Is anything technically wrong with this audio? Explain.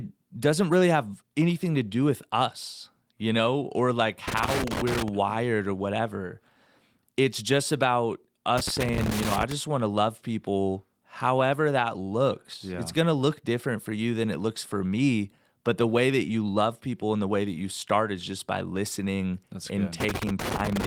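Yes. Loose connector crackle occurs three times: 4.28 to 5.08 s, between "you know or like" and "or whatever"; 8.58 to 9.52 s, between "just about" and "want to love people"; and 20.00 to 20.85 s. A worn contact keeps breaking, chopping the speech into irregular scratchy bursts. The waveform shows jagged dropouts and spikes, and the spectrogram shows broadband vertical streaks.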